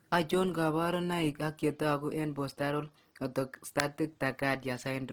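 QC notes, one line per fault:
Throughout: Opus compression, likely at a rate near 16 kbps in its music (CELT) mode. The speech turns rough and grainy, with a plainly audible noisy texture on sustained sounds and little of MP3's swirling. With so few bits, the encoder keeps each band's energy but fills much of the detail by folding lower bands or with noise. Bandwidth stays full, reaching about 20.2 kHz, so the damage sounds like grain rather than muffling.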